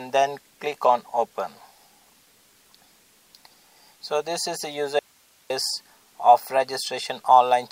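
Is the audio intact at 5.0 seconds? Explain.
No. An audio dropout to a faint residue runs from 4.99 to 5.50 s, so 5.0 s falls just inside it. The sound cuts off abruptly rather than fading, and for about half a second (509 ms) only hiss remains, some 35 dB below the normal level, before the sound returns just as suddenly. The likely cause is a brief loss of the incoming signal while the path after the break stayed live and passed its own noise floor.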